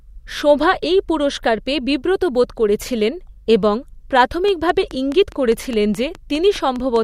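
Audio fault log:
4.48 to 6.97 s, train of clicks: likely interference or a faulty connection injecting pulses, giving regular ticking at about 4.8 per second, roughly fifteen clicks, peaking about 5 dB above the speech.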